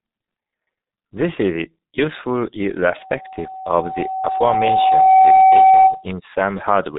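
From the start, the speech carries heavy G.723.1 codec damage. Nothing above 3.8 kHz survives, so the sound is dull and boxed in. The codec works in long frames and updates its model of the voice slowly. Quick changes get smeared, and consonants blur together. Voiced parts take on a rough, hoarse grain. The depth of the damage fits a very low rate of around 6 kbit/s.

At 2.98 s, right after "is useful", a loudspeaker feedback squeal begins. The microphone is picking up the speaker it feeds, and at 759 Hz the loop gain has passed one. That tone feeds itself. It swells over about two seconds into a steady whistle. At its peak it sits around ten decibels above the speech. It stops at 6.06 s, when the loop is broken.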